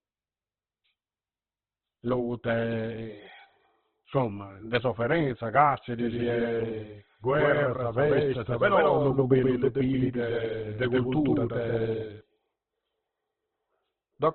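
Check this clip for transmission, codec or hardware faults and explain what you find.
Two faults are audible: heavy codec damage across the whole recording, and a second copy of the speech running alongside the first for several seconds in the middle.

Opus compression, throughout: the speech sounds grainy, rough and boxed-in, with nothing above 4.4 kHz. The likely cause is Opus in its music (CELT) mode at a very low rate, which fits about 12 kbps. Starved bands are filled with noise or folded content, and the bandwidth is cut to narrowband.

Doubled audio track, from 5.99 s to 12.21 s, starting just after "insomma de sofferenza": the speech turns smeared and stuttery, with an equally loud, dry echo trailing by roughly 150 ms. It begins and ends abruptly. The likely cause is the same full-band audio being mixed in twice, out of step.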